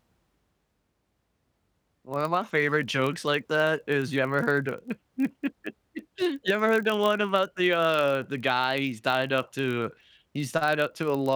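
A steady buzz at about 43.1 Hz runs under the speech from start to finish, a rasp at the block rate, while pitch and pace stay essentially unchanged, since the speech runs only about 0.1 percent slow. This is a padded block size mismatch: one stage hands over blocks slightly shorter than the next stage reads, so each block ends in a short run of zeros. That rate fits a 1024-sample read block.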